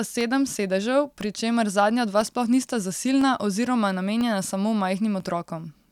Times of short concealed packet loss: none

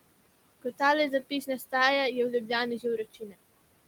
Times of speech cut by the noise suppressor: 1.30-1.73, 3.14-3.35

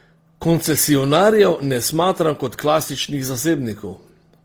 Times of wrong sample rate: none

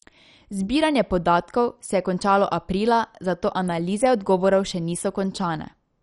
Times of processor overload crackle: none

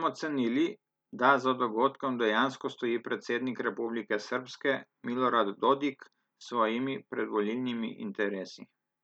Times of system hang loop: none

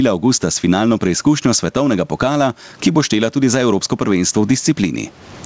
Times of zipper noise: none

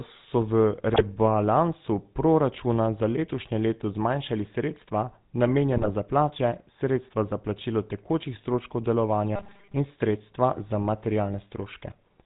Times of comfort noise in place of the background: none

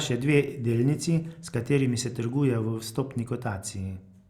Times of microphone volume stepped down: none

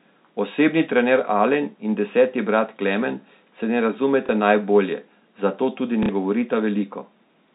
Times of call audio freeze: none

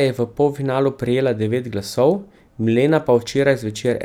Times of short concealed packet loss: none

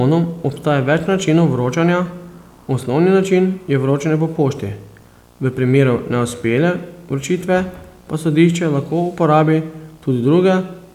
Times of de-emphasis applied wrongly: none

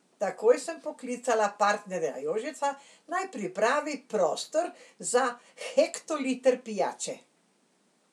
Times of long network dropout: none

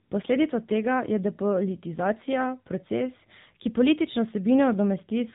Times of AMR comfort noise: 0.04-0.12

